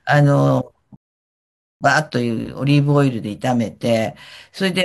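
At 0.96 s the player's buffer runs dry: it has played everything downloaded so far and has to stop and wait for more data before continuing. That is a rebuffering stall, and it lasts until 1.81 s. The speech cuts abruptly to silence for about 0.85 s, then picks up exactly where it left off, with nothing skipped. The only damage is a gap inserted mid-flow, stretching the clip by that much.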